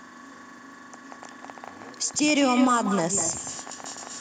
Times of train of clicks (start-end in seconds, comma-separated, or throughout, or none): 0.94-4.08